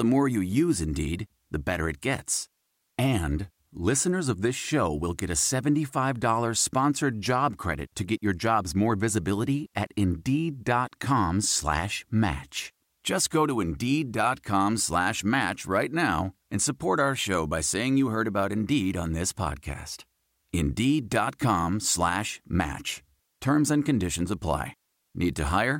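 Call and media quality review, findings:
No audible faults found.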